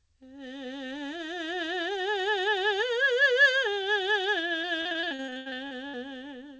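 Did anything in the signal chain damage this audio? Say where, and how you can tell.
Yes: repeated packet loss (robotic sound) at the network stage, 4.62 to 5.95 s. The music turns choppy as about fifteen holes, the longest 80 ms, are patched by stretching the last sound, concealing about 30% of the span.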